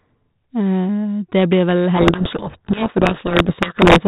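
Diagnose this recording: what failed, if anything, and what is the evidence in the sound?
Codec payload misread, codec stage. From 1.96 s, after "blir vel", speech drowns in harsh distortion. The decoder unpacks G.726 code-word bits in the wrong order.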